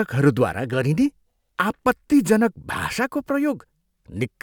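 No technical fault can be heard anywhere in the recording, so there is nothing in the signal to place in time or to describe.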